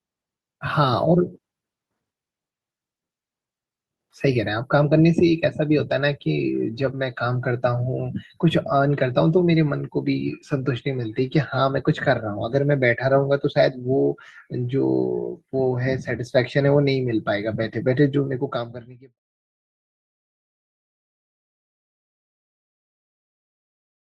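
There are no technical faults in this speech clip to describe in time order.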